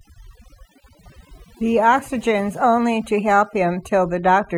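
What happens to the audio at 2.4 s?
At 2.4 s, overdone noise removal is at work, as it is across the whole clip. Bands near the noise floor are cut away. The background breaks up into twinkling specks.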